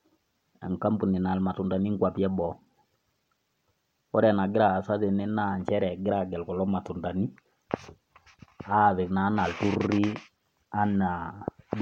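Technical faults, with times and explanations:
2.37 to 3.87 s and 9.61 to 11.75 s, Bluetooth SBC bit pool drop: right after "naya ilmatundani inkwapi e" and again after "naa anaa", the treble goes dull and a gritty noise creeps in. That fits the link squeezing the bit pool from 31 to 16, about 110 kbps, starving the top sub-bands and coarsening everything else until the rate recovers.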